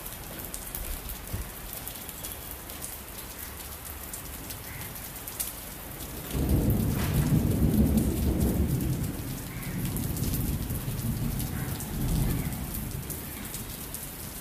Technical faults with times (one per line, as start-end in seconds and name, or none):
1.17-1.42 processor overload crackle
4.81-5.11 processor overload crackle